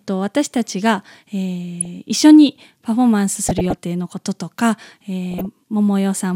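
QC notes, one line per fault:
1.80–1.86 s, 3.42–3.78 s and 5.31–5.46 s: DAB burbling. Bit errors at a few tenths of a percent slip past error correction into the MP2 audio data. The burst at 3.42 s is the longest, spanning what sounds like about fifteen frames, against about five at 1.80 s and ten at 5.31 s. Corrupted samples land in individual sub-bands, so each burst is heard as short noise blips in narrow frequency regions laid over the speech.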